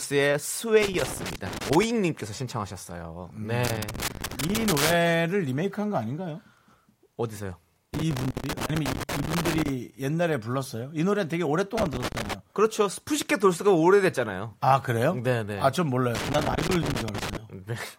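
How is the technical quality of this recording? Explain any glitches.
The recording has repeated bursts of loose connector crackle at 0.82–1.84 s, 3.65–4.94 s, 7.94–9.69 s, 11.78–12.33 s and 16.15–17.37 s. A worn contact intermittently breaks the speech signal, producing irregular scratchy crackle.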